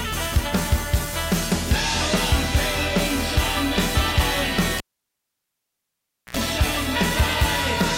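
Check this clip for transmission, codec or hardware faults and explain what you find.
One hardware fault is present. From 4.78 to 6.37 s, a cable pulled and plugged in: a pop, about 1.5 s of near silence, 71 ms of 60 Hz mains buzz during tip-only contact, then a reconnection pop.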